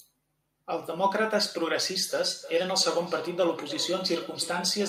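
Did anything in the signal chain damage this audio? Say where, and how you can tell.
Yes. Call processing broke down here: a feedback echo between two devices starts at 2.09 s and runs to the end. A second device in the room replays the far-end audio into a microphone whose echo canceller can't subtract it, so the speech returns roughly every 0.3 s, thinner and ringing, peaking about 15 dB below the speech.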